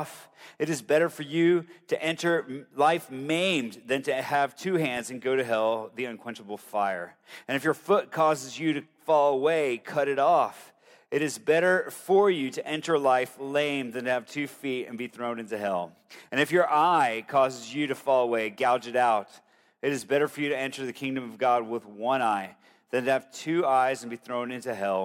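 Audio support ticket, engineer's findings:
No audible faults found.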